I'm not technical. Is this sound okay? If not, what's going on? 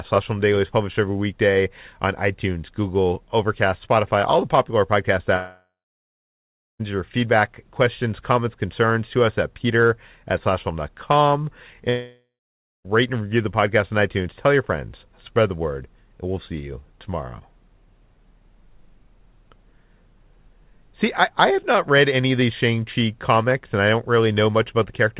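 No. A long network dropout, likely, hits at 5.36 to 6.81 s, after "all the popular podcast", and again at 11.89 to 12.86 s, before "and review the podcast". The last sound stretches into a fading buzz, then silence, and that audio is simply gone. The phone-call-style sound, with nothing above 4 kHz, is just how the call connection carries it.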